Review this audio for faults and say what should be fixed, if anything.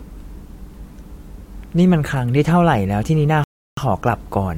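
Rebuffering stall, 3.44 to 3.77 s: the player exhausted its downloaded audio, so the speech drops to silence for roughly a third of a second, then picks up exactly where it halted. Nothing is skipped, but the gap adds about 335 ms. To prevent it, keep a larger playback buffer ahead of the play position, or start playback only once enough audio has downloaded to cover network slowdowns.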